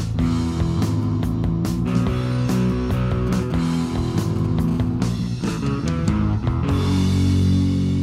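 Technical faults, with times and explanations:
3.27–4.70 s: GSM signalling bursts. A nearby 2G handset is exchanging short control transmissions with the network rather than carrying a call. Each group of radio bursts, pulsed at 217 Hz, is rectified by the audio circuitry into the baseband. The result is a galloping dit-dit-dit pattern of brief rasping buzzes that has nothing to do with the programme material. It sits roughly 20 dB below the signal.
4.71–7.38 s: GSM phone buzz. Immediately after the signalling stops, the handset settles into a call and transmits continuously at its 217 Hz burst rate. The audio stage demodulates this as a steady, hard buzz at 217 Hz. Because the radio pulses are square-edged, the buzz carries a dense stack of harmonics, which gives it its raspy character. It sits at about 33 dB below the signal, unrelated to the sound beneath it.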